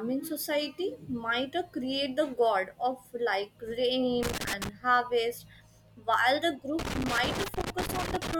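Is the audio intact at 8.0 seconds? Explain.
No. At 8.0 seconds the speech sits inside a stretch of loose connector crackle running from about 6.79 to 8.34 s, starting right after "while the". A worn or dirty contact keeps making and breaking, chopping the signal into irregular bursts of scratchy crackle.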